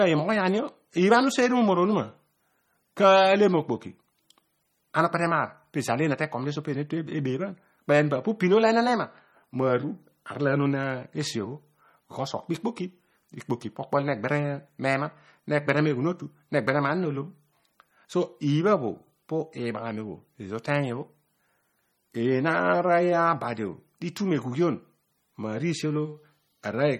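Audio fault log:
Throughout, MP3 compression damage is plainly audible in the speech. Nothing is heard above 18.6 kHz, and weak frequency detail drops in and out between frames, giving a watery, swirly texture. This likely comes from an MP3 encoding at a low bitrate near 32 kbps.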